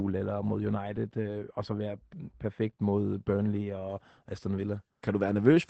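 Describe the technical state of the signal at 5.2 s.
At 5.2 s the speech carries Opus voice compression, present across the whole clip rather than at that moment alone. The codec is running its SILK linear-prediction coder in wideband, so nothing above 8 kHz survives, and the excitation is quantised coarsely, which fits a low bitrate around 12 kbps. The damage is plainly audible: the voice sounds muffled and dull at the top, with a hoarse, slightly robotic grain.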